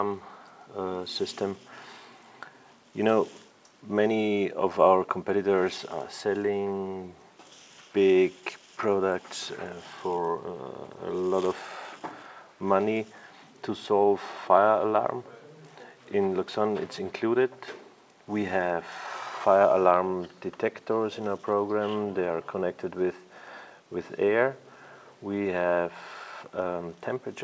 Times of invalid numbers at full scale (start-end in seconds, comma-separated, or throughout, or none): none